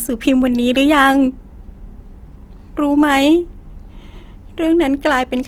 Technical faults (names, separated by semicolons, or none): Opus compression